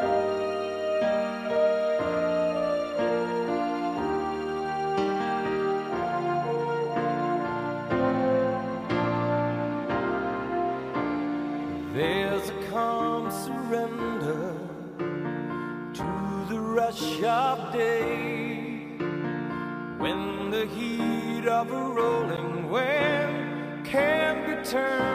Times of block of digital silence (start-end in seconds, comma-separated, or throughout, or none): 16.03, 22.37